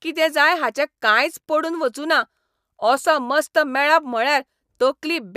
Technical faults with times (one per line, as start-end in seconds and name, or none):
none